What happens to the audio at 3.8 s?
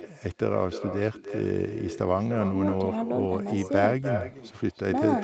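At 3.8 s the speech is still shadowed by echo with no canceller, about 10 dB down and roughly a third of a second late, because the far end's speaker bleeds into its mic.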